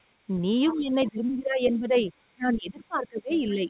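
Other side's voice leaking through at 0.68 to 0.76 s: a faint second voice, about 20 dB below the talker, briefly comes through, likely loudspeaker echo the canceller left behind. Speech suppressed in double talk from 0.68 to 2.09 s: the talker's level sinks by up to about 20 dB, likely because the canceller turned everything down while both sides spoke. It happens again from 2.28 to 3.67 s, this time dipping by as much as about 30 dB. Inside that stretch, from 3.32 to 3.52 s, the other side's voice leaks through again at about 20 dB below the speech. Throughout, the audio has nothing above 4 kHz, which fits a G.711 call path at 64 kbps.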